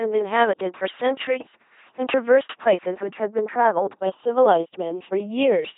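A speech clip with two faults running throughout. The channels are drifting apart: their offset slowly grows to under half a millisecond, which suggests clocks differing by roughly a hundred parts per million. Heard in mono, this sounds like slow flanging. The speech also has heavy LPC-10 vocoder damage. The voice is buzzy and robotic, with nothing above 3.8 kHz, which fits a 2.4 kbit/s vocoder forcing every moment to be either voiced or unvoiced.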